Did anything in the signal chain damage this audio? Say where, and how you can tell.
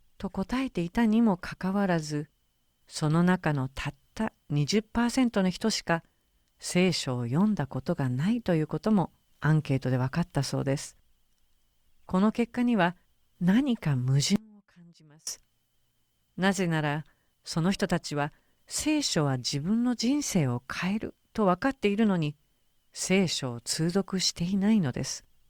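Yes: an audio dropout to a faint residue from 14.36 to 15.27 s; speech collapses abruptly to a faint leak roughly 30 dB down, likely a momentary break in the analogue wiring or connection.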